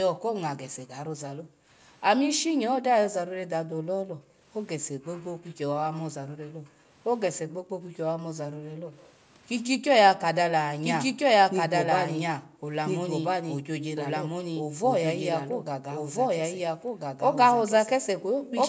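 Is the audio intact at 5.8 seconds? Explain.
No. From 3.26 to 8.91 s the background is gated by the echo canceller: while the loudspeaker plays, it ducks the microphone by up to about 28 dB, so room sound drops out and returns, unlike a full dropout.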